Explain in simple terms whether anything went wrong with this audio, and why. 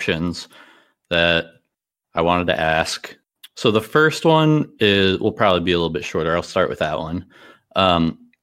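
Nothing went wrong with it.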